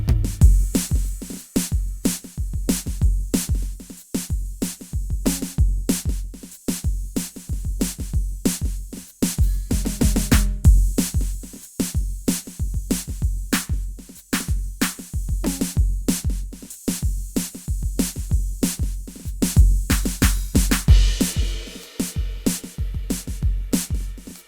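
Nothing goes wrong anywhere in this music, so there's no technical fault to point out at any moment.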